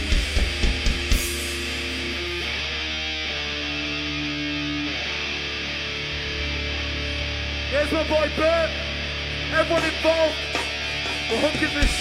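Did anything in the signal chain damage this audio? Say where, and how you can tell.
No, nothing in the chain from capture to playback has left an audible mark on this signal.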